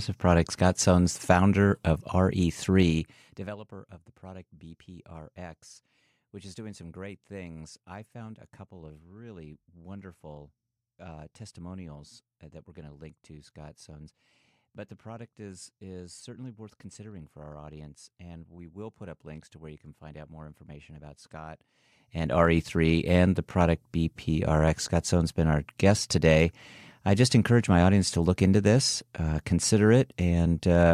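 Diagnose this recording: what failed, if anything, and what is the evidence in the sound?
Zipper noise at the gain stage. Ticking at 2.79–3.62 s and 21.64–22.48 s. Level jumps in unsmoothed 2 dB steps, about fifteen a second.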